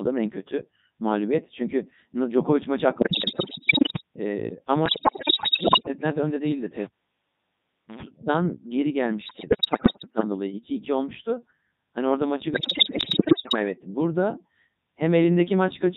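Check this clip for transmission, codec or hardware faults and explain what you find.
Two faults are present: heavy low-bitrate vocoding across the whole recording, and four bursts of digital radio bit errors.

Codec 2 vocoder, throughout: the speech has been rebuilt from pitch, voicing, level and a coarse spectral envelope, with the original waveform discarded. The sound fits the codec's 3.2 kbit/s mode. The speech comes out robotic and buzzy, with heavy smearing of anything beyond a single voice.

Bit errors on digital voice radio, at 3.00–4.01 s, 4.86–5.88 s (just before "önde değildi"), 9.22–10.24 s (just after "evet geri") and 12.54–13.56 s (just after "orada maçı"): corrupted bits reached the vocoder, so each frame's pitch, level, voicing and tone colour were decoded wrongly. Roughly one bit in ten was flipped in the first and third bursts and about 15% in the last, and the second burst was far worse at around a third. 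Each burst lasts about a second and turns the synthetic speech into pitch jumps, warbles, bleeps and garbled robotic sound.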